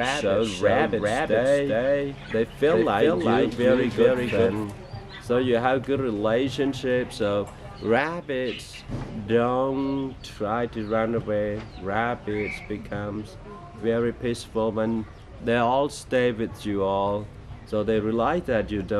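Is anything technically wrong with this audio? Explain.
Yes. A doubled audio track is present from the very start until 4.64 s, where the second copy drops out abruptly. The likely cause is a second, slower capture path or an edit holding two copies out of step, mixing the same full-band sound back in around 400 ms late. That copy is roughly as loud as the original, with no decay or room colouring, so every event is followed by a flat, distinct repeat.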